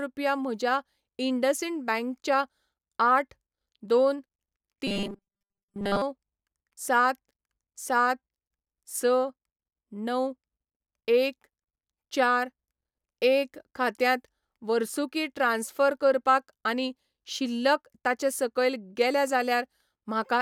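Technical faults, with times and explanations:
4.87 to 6.02 s: robotic sound from repeated short buffers. Speech becomes a rigid 200 Hz buzz. Likely a 5 ms chunk kept repeating, replacing late audio.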